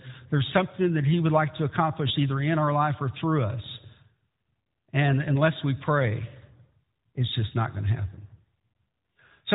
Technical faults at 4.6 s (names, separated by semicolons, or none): none